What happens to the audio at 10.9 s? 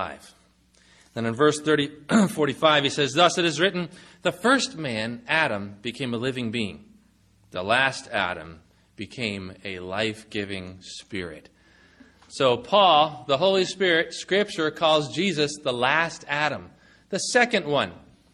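Nothing happens at 10.9 s: the audio plays through that moment intact, with no dropout, click or distortion to be heard.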